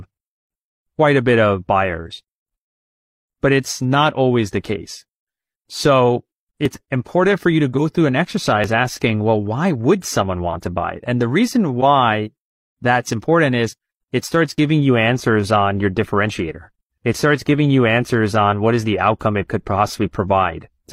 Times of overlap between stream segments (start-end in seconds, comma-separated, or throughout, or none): 6.65-6.68, 8.64-8.68, 14.58-14.60